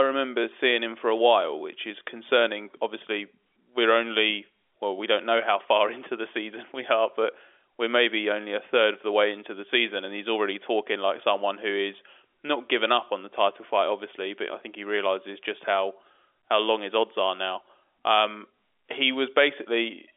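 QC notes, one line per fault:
No fault to log for this speech clip.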